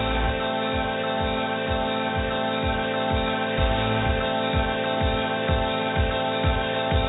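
No technical faults can be heard in this audio. It carries the narrowband, telephone-like sound and low-level coding noise of a G.711 mu-law call path at 64 kbps, which is working as expected.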